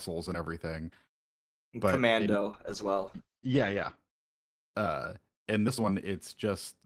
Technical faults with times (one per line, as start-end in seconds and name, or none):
2.53-4.03 call bitrate drop